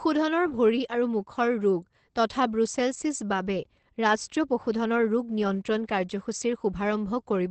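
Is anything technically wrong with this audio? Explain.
Yes. Opus voice compression affects the speech from start to finish. The coder is running in its SILK linear-prediction mode at a wideband setting, so the band stops near 8.4 kHz and nothing is heard above it. The excitation is coded coarsely, which fits a rate around 12 kbps. The result is plainly audible: the speech sounds muffled and slightly hoarse, with a faint robotic edge.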